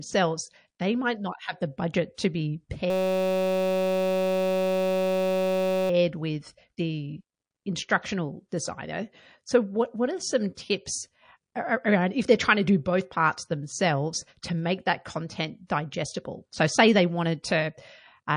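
MP3 compression runs through the whole speech clip: a watery, swirly quality with metallic chirps on s sounds and softened attacks. This is likely from an MP3 encoder starved of bits, consistent with roughly 40 kbps, dropping treble and switching weak frequency lines on and off between frames.

Pre-echo appears at 2.15–2.18 s, 8.49–8.52 s, 10.55–10.57 s and 15.67–15.70 s. Each sharp onset is preceded by a hiss lasting 23 to 34 ms and raised by about 12 to 16 dB. The codec stayed in long blocks of about 52 ms, so noise scaled to each attack spilled into the quiet gap before it.

A system hang loop runs from 2.90 to 5.90 s. The system froze while the sound hardware kept replaying one 5.33 ms stretch of its ring buffer, which fits a 256-sample buffer. The result is a steady buzz at 188 Hz lasting three seconds.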